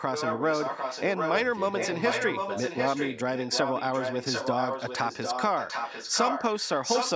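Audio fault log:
0.11–1.39 s, 1.55–3.18 s, 3.35–6.43 s and 6.59–7.11 s, echo leak: a second copy of the speech trails the original by about 0.75 s, only a little quieter than the direct sound. The likely cause is a loudspeaker at the far end of a call whose echo canceller failed to strip out what its microphone picked up, returning that pickup into the line.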